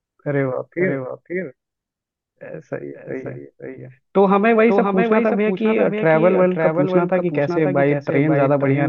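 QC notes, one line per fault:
Throughout: doubled audio track. Every stretch of speech returns about half a second later as a clean, full-band copy roughly 5 dB quieter, with no decay or room tone to it. This is likely the same signal being mixed in twice, once via a slower path.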